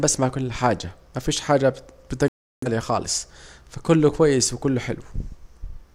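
At 2.28 s, just after "كل حاجة مفيش حاجة", the speech drops out abruptly. This is a digital broadcast dropout. The receiver stopped getting usable frames and muted its output rather than play corrupted data. Silence holds until 2.67 s, when good frames arrive and the speech resumes mid-flow. The gap lasts about 0.39 s, which fits around eight lost frames. Whatever was said in that stretch is simply gone, not smeared or garbled.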